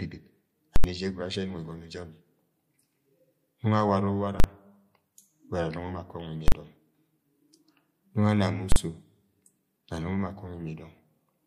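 At 0.76 s the speech gives way to invalid numbers at full scale. A calculation produced infinite or invalid values, and the output is pinned at one extreme value for an 80 ms block. It is heard as a very loud pop at 0.76 s and another at 0.84 s, with no sound between. The same fault returns at 4.40 s, 6.48 s and 8.72 s. Each block lasts only 40 ms, so each is a single bang.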